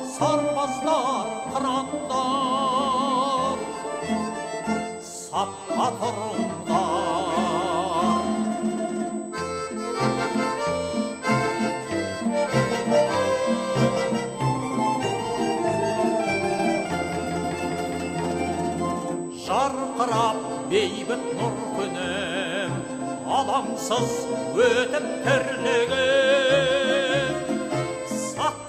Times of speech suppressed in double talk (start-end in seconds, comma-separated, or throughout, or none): none